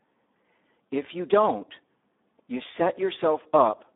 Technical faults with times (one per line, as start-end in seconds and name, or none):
0.00-3.96 Speex codec